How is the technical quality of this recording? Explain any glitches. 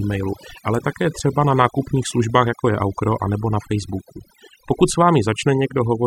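The technical quality is compromised by overdone noise removal running through the whole speech recording. The noise reduction was set so aggressively that any frequency band close to its noise estimate is cut away, taking the softer parts of the voice with it. The background drops to near silence scattered with twinkling specks. On a spectrogram, the gaps show as dark, empty regions dotted with isolated bright flecks, and the speech harmonics appear patchy and ragged at their edges.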